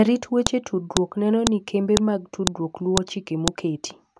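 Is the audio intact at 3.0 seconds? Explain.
No. At about 2.97 s, a separate WAV piece was joined on without its header being stripped, so those few dozen header bytes play as samples. This file header played as audio cuts through the speech as a brief, sharp, loud click.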